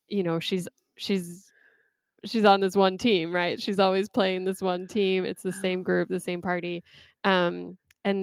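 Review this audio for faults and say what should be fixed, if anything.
No faults can be heard in this speech recording. Nothing needs to be fixed.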